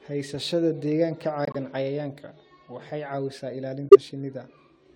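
Speech with two corrupt frame muted dropouts. The sound drops abruptly to silence from 1.45 to 1.56 s, then again from 3.89 to 3.96 s. The decoder rejected damaged compressed frames. Silence filled each gap, spanning several frames, and timing stays intact.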